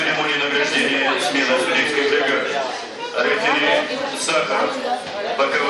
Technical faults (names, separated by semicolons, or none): none